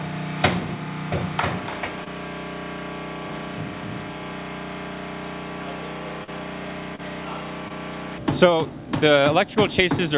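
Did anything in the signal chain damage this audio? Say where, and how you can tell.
Yes, in the network stage: short concealed packet loss at 2.04, 6.24, 6.95 and 7.68 s, with 20 to 40 ms of audio missing each time. The receiver extended the preceding sound across each gap and blended back, leaving brief smears or wobbles in the 4 kHz-limited call audio.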